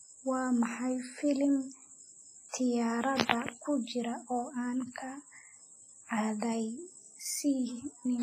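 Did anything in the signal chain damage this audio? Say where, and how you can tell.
Yes, at the codec stage, likely WMA compression. Throughout the speech a ringing, washy hiss breathes with the signal, heavy enough to suggest about 24 kbps. Long transform blocks smear quantisation noise, and weak components are zeroed. A spectrogram shows holes, smearing, and nothing above 15.3 kHz.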